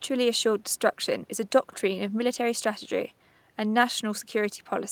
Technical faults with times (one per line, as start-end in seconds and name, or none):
none